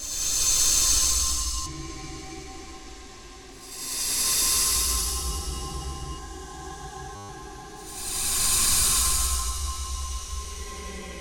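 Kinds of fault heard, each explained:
System hang loop: from 7.16 to 7.29 s the audio freezes into a steady buzz at 100 Hz, because the computer or its audio driver stalled while the sound hardware kept replaying the same ring buffer. A single 10 ms slice repeats exactly, 13 times in a row, and with a loop that short the repeats fuse into a tone rather than a stutter. When playback resumes, about 150 ms of audio is gone.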